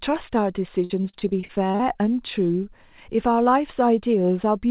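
From 0.84 to 1.88 s, repeated packet loss leaves ten gaps, the longest 57 ms; concealment stretches the previous sound across roughly a quarter of that span, giving choppy, robotic speech, band-limited to 4 kHz by the call path.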